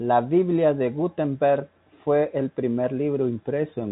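No technical faults occur at any point in this speech clip, so there is nothing to describe in time order.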